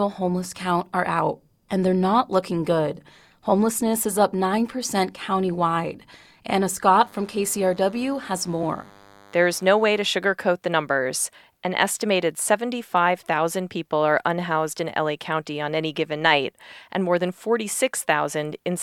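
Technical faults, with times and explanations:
6.97–10.07 s, DECT cordless phone buzz: a nearby DECT handset or base station pulses its radio transmitter every 10 ms, and the audio circuitry rectifies those bursts, leaving a steady, thin 100 Hz buzz rich in harmonics, sitting roughly 30 dB beneath the speech.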